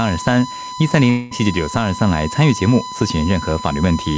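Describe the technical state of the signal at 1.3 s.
A long network dropout runs from 1.10 to 1.34 s, so at 1.3 s the signal is near its end. About 210 ms of audio never arrives, most likely because packets were lost. The receiver fills the gap by extending the last sound as a fading buzz or hiss, and the sound resumes at 1.34 s with that stretch missing.

A USB whine also sits under this moment and the whole clip: a steady 1 kHz tone roughly 10 dB below the signal. It comes from the bus's 1 ms frame activity leaking into the audio through power or ground. Above it, the G.722 call path has nothing above 8 kHz.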